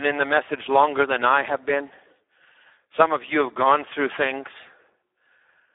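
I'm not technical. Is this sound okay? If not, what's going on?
No. For the whole clip, the speech passes through the Speex codec at a very low quality setting, so the voice sounds hoarse and noisy. It is also muffled, with nothing above about 3.8 kHz. Unlike a plain phone line, which sounds thin but clean, the voice itself is roughened here.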